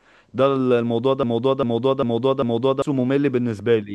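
From 1.23 s to 2.82 s the speech locks into a broken-record loop: one 0.4 s fragment plays four times back to back, identical each pass, likely from a stalled player or stream resending its last buffer. Unlike a dropout or echo, nothing goes silent or decays.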